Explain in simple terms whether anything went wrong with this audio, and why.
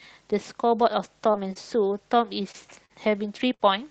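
Between 1.03 and 3.61 s the speech has scattered short gaps: about five tiny dropouts, none longer than roughly 50 ms. The call software covered each hole by stretching the last bit of sound, so you hear brief ticks or small hiccups.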